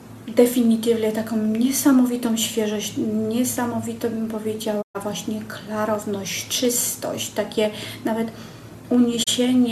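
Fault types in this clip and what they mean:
digital broadcast dropout: sound quickly fades to silence near 4.81 s and 9.22 s, then returns, as the receiver muted over lost or corrupted frames.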